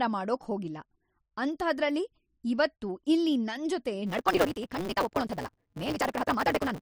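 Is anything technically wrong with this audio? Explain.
Yes. From 4.05 s to the end, the speech shows a block size mismatch (truncated). One stage writes longer blocks than the next reads, so each block's tail is discarded. This produces a 188 Hz buzz, which fits a 256-sample read block, and speeds the speech up 1.88 times at roughly normal pitch.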